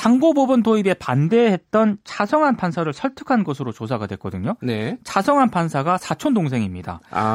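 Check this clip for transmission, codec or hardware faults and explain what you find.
One fault appears: channel delay with comb filtering, from 1.26 to 3.47 s. One channel lags by roughly two samples before mono summing. This notches near 10 kHz, dulling the speech.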